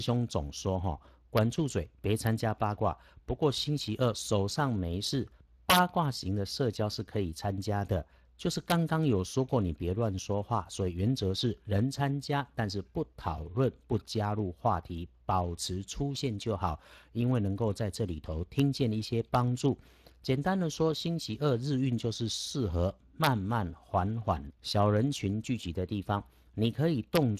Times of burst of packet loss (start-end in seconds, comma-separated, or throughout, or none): none